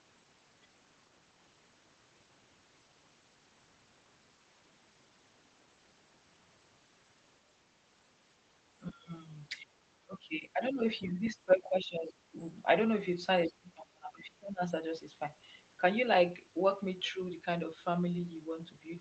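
Speech suppressed in double talk occurs at 8.9–9.12, 9.62–9.71, 10.05–10.83, 11.01–12.36 and 13.47–14.64 s, with the speech dipping by up to about 25 dB. This is likely an echo canceller mistaking overlapping far-end talk for echo and ducking the near talker.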